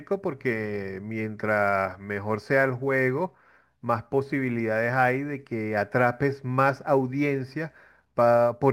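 From start to finish the speech carries sample clock jitter: the converter's clock is wobbling, so each sample lands a little early or late, by something like 3 microseconds. Since the timing error turns into amplitude error in proportion to how fast the waveform is moving, you get a fine grainy hiss riding on the voice, sitting roughly 35 dB under it, thickest on loud and bright sounds like sibilants and dropping away entirely in the pauses.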